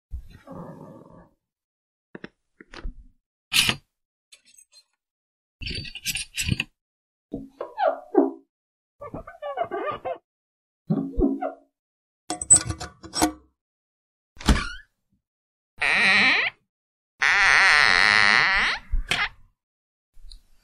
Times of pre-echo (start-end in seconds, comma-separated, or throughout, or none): none